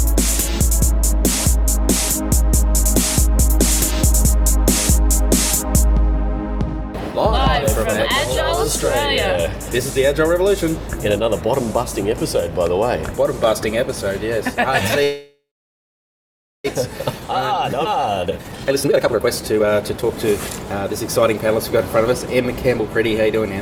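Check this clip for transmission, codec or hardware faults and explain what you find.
Three transmission faults appear in the second half of the clip: a freeze, a jump forward, and a stretch of sped-up playback.

Call audio freeze, 15.03 to 16.66 s. The sound halts and the gap is filled for about 1.6 s. This is likely a case of packets stalling in transit until the jitter buffer ran dry. The receiver stretches the last sound into a fading tail, then holds near silence for about 1.2 s. When the audio resumes it picks up exactly where it stopped, so nothing is lost, but playback now runs about 1.6 s later than before.

Skip ahead, 17.85 to 17.87 s. Playback leaps forward with almost no gap, and roughly 0.4 s of audio is missing. The two sides of the jump are butted together. This happens when a stretch is discarded, in transit or by an overflowing jitter buffer, while later audio is already queued. 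It claws back some of the delay the freeze added.

Jitter buffer speed-up, 17.97 to 22.27 s. Having still banked more audio than it wants, the receiver trims short pitch-period-sized slices over and over. Over these four-plus seconds that removes about a second in total. The pitch stays put, but the audio runs at about 127% of normal speed and sounds noticeably hurried until the buffer is back at its target.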